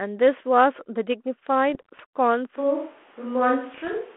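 From 1.74 to 2.01 s the speech breaks into pops and short rough bursts with brief jumps in level. These are bit errors on an ADPCM link, with a low error rate of a few tenths of a percent. Unlike a single click or a dropout, each flipped bit throws the decoder's step size and prediction off track, so the damage rings on for a few milliseconds before the codec recovers. The same gritty bursts come back from 3.74 to 3.94 s.

From 2.59 s to the end the sound turns roomy and hollow and loses bass, with room noise roughly 30 dB below the speech. The level barely changes. This is most likely a switch to a distant microphone. It differs from added reverberation or an equaliser change because the new tone, extra room sound and thinner low end all arrive together at one sudden moment and stay. Throughout, the sound carries the narrow telephone band of the G.726 ADPCM codec, which fits a 32 kbit/s link.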